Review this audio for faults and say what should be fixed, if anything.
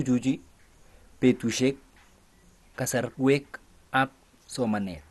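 Throughout the speech, the sound is dull and gurgling, with granular distortion. Nothing is present above 12.2 kHz. This is likely MP2 compression at a low bitrate, near 64 kbps, where starved upper sub-bands switch off and the rest quantise coarsely. Encode at a higher bitrate to prevent it.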